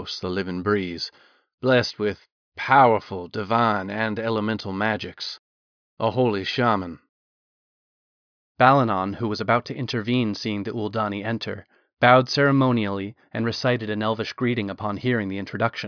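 No technical faults can be heard anywhere in the speech.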